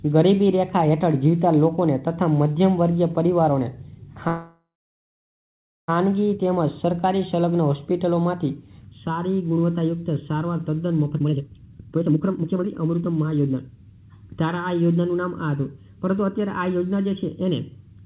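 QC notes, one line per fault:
4.28–5.90 s, call audio freeze: the last sound stretches into a fading buzz, then about 1.2 s of silence, likely from delayed packets draining the jitter buffer; playback resumes intact, 1.6 s late.
8.85–18.05 s, channel delay (comb filtering): one channel lags by roughly 0.7 ms and the mono sum cancels shared content at evenly spaced notches from around 700 Hz, giving a hollow, phasey tone.
11.12–13.77 s, jitter buffer speed-up: the receiver trims pitch-period slices repeatedly, about 1.5 s in all, to shed excess buffered delay, so the audio runs at 160% speed without a pitch change.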